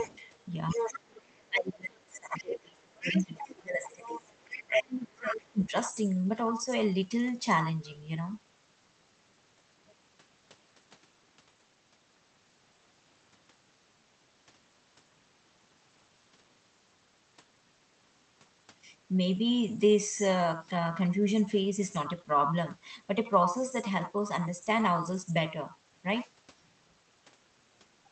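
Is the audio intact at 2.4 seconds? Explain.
No. The speech is being pushed down from 0.74 to 5.73 s, in what sounds like speech suppressed in double talk: the echo canceller was likely unable to tell the talker from the returning far-end signal and attenuated both. The voice dips by as much as about 30 dB, and the waveform envelope shows the matching collapses. Over 2.14 to 2.4 s, ending right at this point, a scrap of the other side's voice leaks through, likely residual loudspeaker echo the canceller failed to remove. It sits about 25 dB below the speech and shows on a spectrogram as a faint, separate band of harmonics.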